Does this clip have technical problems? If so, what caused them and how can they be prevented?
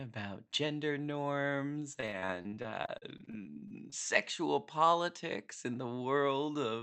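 Yes. Repeated packet loss (robotic sound) runs from 1.79 to 3.94 s: 23 short gaps, up to 40 ms each, are patched by stretching the previous sound, turning the speech choppy. A steadier network connection or a deeper jitter buffer would prevent it.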